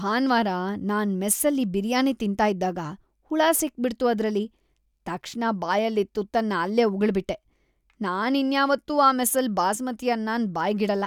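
No technical faults are audible.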